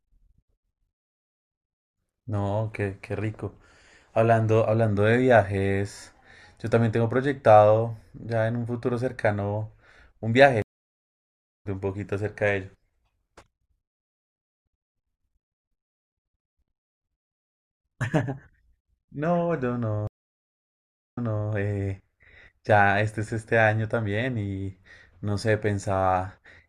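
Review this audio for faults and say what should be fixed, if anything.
Stream reconnect at 10.62 to 11.67 s and again at 20.07 to 21.50 s. Each time the connection dropped, the speech went silent for about 1.0 s and then 1.05 s, and a fresh decoder picked the stream up mid-flow. After the first gap the speech resumes roughly a second further on, so that stretch is lost. After the second it resumes 384 ms earlier, so a short stretch repeats. Buffer more on the client so that brief connection drops are absorbed without a full reconnect.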